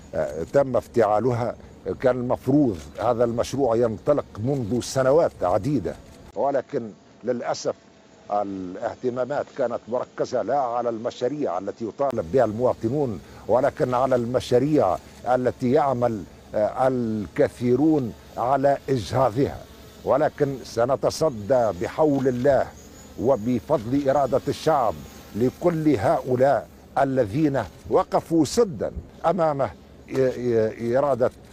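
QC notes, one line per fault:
6.31–12.13 s, input switched to a poorer device: after a 20 ms gap the sound turns dull and boxy, with nothing above 7.6 kHz, drops a few dB in level, and gains a faint new noise floor, then clears again at 12.13 s. The likely cause is a change to a narrower-band microphone. A plain low-pass filter or EQ change would not bring the gap, level shift and different background together.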